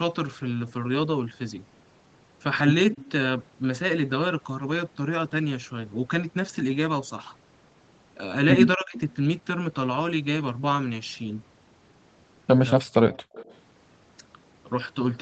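At 2.95 to 3.06 s there's a short scrap of echo leak: a faint copy of the speech trailing the original by 237 ms, roughly 25 dB down. It's most likely a far end on a loudspeaker whose echo canceller let a bit of its own mic pickup slip back into the call.

Around 8.76 to 8.97 s the speech gets suppressed in double talk. For about 200 ms the talker's level sinks by up to around 25 dB, a sudden dip or partial dropout. Both sides were probably talking at once, and the canceller, unable to tell local speech from returning echo, ducked everything. Right after, from 8.98 to 9.15 s, the echo leak returns, again 237 ms late and a bit stronger at around 20 dB below the speech.

At 12.75 to 12.94 s there's another double-talk suppression, deeper this time, up to about 40 dB for roughly 200 ms, so that bit nearly disappears. It's likely the same overlapping-talk confusion in the canceller.

From 13.13 to 13.55 s the longest echo leak shows up, the same 237 ms lag at around 25 dB down. 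It's likely that loudspeaker path again. Inside it, at 13.22 to 13.33 s, the background is gated by the echo canceller. The room tone drops out by up to 40 dB for about 100 ms while the canceller clamps the mic, then comes right back, a brief hole in the ambience. Throughout, nothing reaches above 8 kHz, which fits Opus at 24 kbps on the call path.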